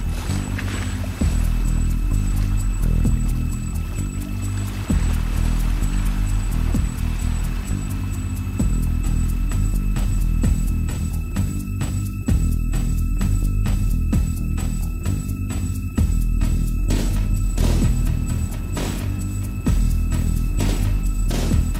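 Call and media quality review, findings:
Steady, raspy buzz from 17.44 s to the end, well below the main signal, roughly 25 dB down. Mains buzz at 60 Hz: sharp switching spikes from a dimmer, rectifier or unshielded run, twice per mains cycle, leave harmonics of 60 Hz reaching into the low kHz range.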